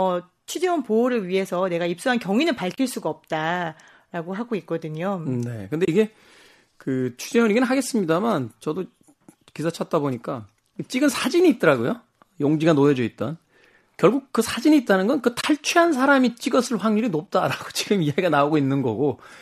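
AAC frame loss with muting leaves short, soft-edged gaps in the speech at 2.75–2.78 s, 5.85–5.88 s and 15.41–15.44 s, each about 30 ms long, which suggests three consecutive 10 ms frames dropped, plus a briefer dip at 17.27 s that fits a single lost frame. The decoder zeroed the missing spectrum, so the overlapping windows fade the sound down and back up. The underlying stream is low-delay AAC compression, likely AAC-ELD at around 64 kbps, with only light coding roughness audible.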